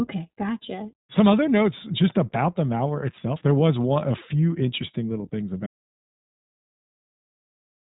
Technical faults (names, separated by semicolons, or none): iLBC codec; audio dropout to silence